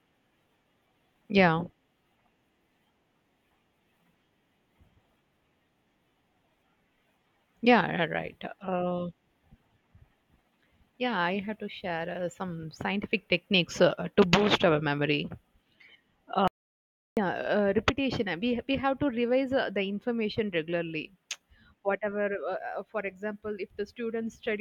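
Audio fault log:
16.48–17.17 s, audio dropout to silence: speech cuts off mid-flow into silence for 0.69 s, with no room tone, then returns abruptly. The input signal was likely lost briefly while recording kept writing silence, so that stretch of speech is gone.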